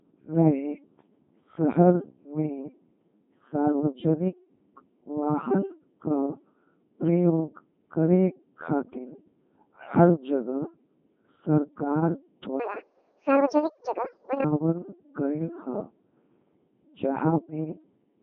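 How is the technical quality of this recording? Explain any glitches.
Technical quality is poor: the speech is heavily vocoded throughout, and one short stretch plays back far too fast.

Codec 2 vocoder, throughout: the audio is rebuilt from pitch, voicing and envelope data at 2.4 kbit/s, so the speech sounds robotic and buzzy, with nothing above 3.7 kHz.

Section at the wrong speed, 12.60 to 14.44 s: this part runs 1.79 times too fast, likely from being played against the wrong clock, so the speech turns hurried and roughly ten semitones higher.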